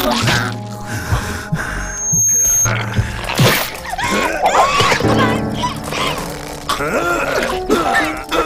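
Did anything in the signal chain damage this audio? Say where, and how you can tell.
Yes. Loudspeaker feedback squeal in the acoustic loop: a 6.4 kHz tone swells over roughly 0.4 s from 1.79 s to 2.69 s, peaking about 5 dB above the sound. Unlike steady electrical whine, it grows on its own.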